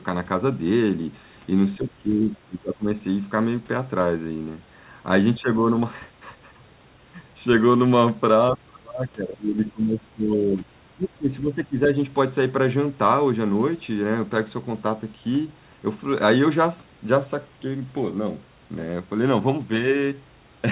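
From 1.77 to 3.02 s the speech sinks by roughly 25 dB, again briefly and more lightly around 5.36 to 5.73 s, then heavily from 8.53 to 10.66 s, about 30 dB down, and once more from 10.96 to 11.95 s. This is speech suppressed in double talk. The likely cause is the echo canceller mistaking the talker for far-end echo while both sides spoke, ducking the voice in chunks within audio already band-limited to 4 kHz.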